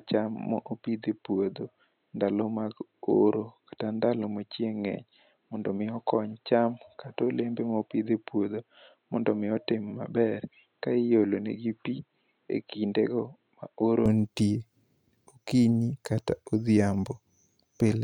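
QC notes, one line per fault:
0.00–14.06 s, input switched to a poorer device: the speech sounds dull and boxy, with nothing above 4.1 kHz, a level roughly 5 dB lower, and a faint new noise floor far below the voice. At 14.06 s it opens up again with no gap. The likely cause is that capture ran through a narrower-band microphone or headset call profile and then moved back to the fuller input, taking that device's bandwidth, level and noise with it.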